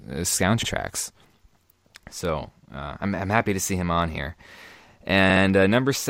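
At 0.62 s the speech stutters: a 64 ms stretch plays once more. At 5.29 s there's a second, longer stutter, with a 64 ms block played twice more, adding 128 ms. Both are repeated frames: a run of compressed frames got written or sent again, so the decoder replays the same slice, which fits a run of three frames each time.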